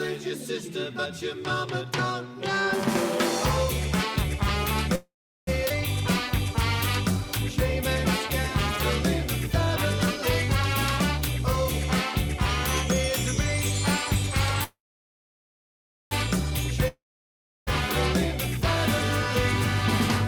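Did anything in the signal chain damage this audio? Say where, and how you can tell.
Yes, the damage sits in the network and receive-buffer stages of a call path.

Call audio freeze, at 4.95 to 5.49 s and again at 14.64 to 16.13 s: each time the last sound is drawn out into a buzz that dies away, then silence, about 0.38 s in the first and about 1.36 s in the second. Playback then resumes exactly where it stopped, with nothing missing. The likely cause is late packets draining the jitter buffer, so the receiver filled the wait with synthetic sound. Each stall adds its full length, 0.52 s and 1.48 s, to the delay.

Skip ahead, at 5.69 to 5.72 s: the sound lurches forward with almost no gap, and about a third of a second of material is simply absent. The two sides are butted together. A stretch of audio was dropped, either in transit or by an overflowing jitter buffer, while later audio was already waiting.

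Jitter buffer speed-up, from 11.20 to 12.38 s: the sound runs about 4% fast, with pitch unchanged. The buffer was holding more than its target, so the receiver trimmed tiny pitch-period slices repeatedly, shedding roughly a twentieth of a second in total.

Long network dropout, from 16.88 to 17.69 s: again a fading buzz and then about 0.68 s of silence. This time the sound returns further on, with about 0.9 s of material never played. Packets were likely lost outright rather than delayed, so the concealment covered a hole instead of a wait.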